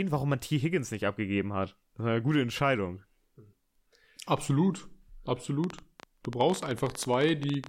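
Likely electrical interference injects a train of clicks from 5.64 to 7.67 s: some thirty unevenly spaced pops, 14.3 per second, ticking loudly over the speech.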